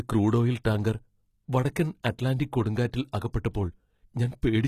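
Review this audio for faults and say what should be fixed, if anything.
The encoder most likely used HE-AAC compression throughout, at a low rate that fits roughly 20 kbps. At that rate only the lower spectrum is truly coded, and the treble is rebuilt by spectral band replication, which copies lower bands upward under a coarse envelope. The damage is plainly audible across the speech: the synthetic top end has harmonics that do not line up with those below the crossover, and nothing reaches above 14.9 kHz. To prevent it, encode at a higher bitrate or with plain AAC so the treble is coded directly rather than replicated.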